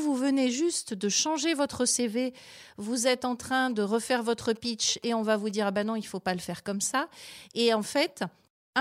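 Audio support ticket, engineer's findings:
GSM signalling bursts, 3.70 to 5.84 s. Galloping ticks and short 217 Hz buzzes, well under speech level. Nearby 2G phone signalling. Audio circuit rectifies its radio bursts.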